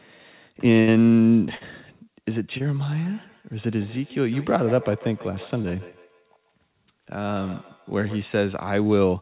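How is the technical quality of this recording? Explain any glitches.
The recording has several faults over a narrowband call path with nothing above 4 kHz, which points to a G.711-style telephone codec.

A burst of packet loss occurs at 0.80–0.89 s and 1.55–1.63 s. About 80 ms and 60 ms of audio are lost, and the receiver stretches the last sound into a fading buzz or hiss. These are longer than the short losses.

Short concealed packet loss occurs at 2.58 s and 5.62 s, with only about 20 ms missing each time. The receiver quickly blends a synthesized continuation back into real audio, which leaves a brief smear or wobble rather than an audible gap.

Feedback echo between two devices runs from 2.97 to 8.28 s. A second device's loudspeaker feeds back into a microphone, so the sound returns roughly every 150 ms, thinner and ringing, at up to about 20 dB below the speech. The regular repeats set it apart from room reverberation.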